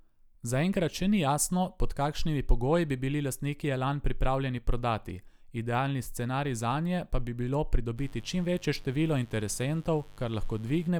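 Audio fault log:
7.95–10.92 s, mains buzz: right after "bi bilo" a steady, raspy buzz sets in under the speech and holds until just before the end. It is built on 50 Hz, with sharp switching spikes arriving twice per mains cycle, so the energy spreads across a dense ladder of harmonics climbing well into the kilohertz range. That spiky, harmonic-rich shape is why it rasps rather than hums, sitting roughly 30 dB below the speech.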